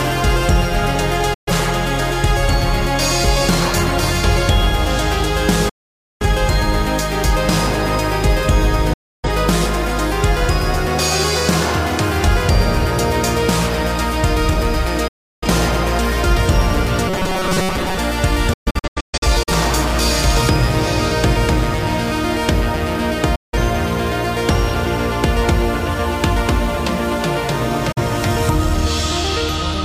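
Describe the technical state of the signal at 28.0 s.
A digital broadcast dropout runs from 27.92 to 28.01 s. The receiver stopped getting valid frames and muted, so the sound fades out over 8 ms into a short silent hole. About 43 ms of programme is lost, which fits a single dropped frame, before the audio resumes.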